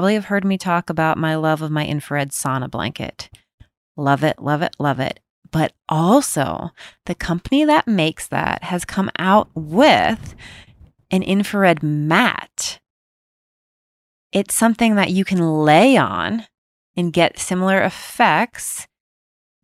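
No technical faults can be heard anywhere in the speech. There is no moment in the recording that needs marking with a time.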